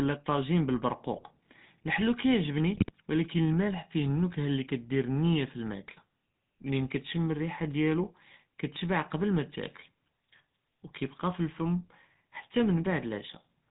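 Across the whole recording the speech carries the buzzy, gravelly texture of the GSM full-rate codec, plainly audible and consistent with its 13 kbps stream. The codec rebuilds the voice by driving a vocal-tract filter with regularly spaced pulses and keeps only a thinned excitation, so the roughness is baked into every syllable and nothing survives above 4 kHz. Unlike packet-loss smearing, this coloration is steady, never coming and going.

GSM bit errors break through at 1.14 to 1.27 s and again at 2.74 to 2.92 s. Corrupted bits reach the decoder, so the filter, pitch and gain values for a few 20 ms frames come out wrong: the spectrum bends or the level jumps, giving short squawks and gargling pops. Their lengths fit roughly six and eight damaged frames. Dropouts would leave gaps or repeats. These bursts are distorted sounds where the speech should be.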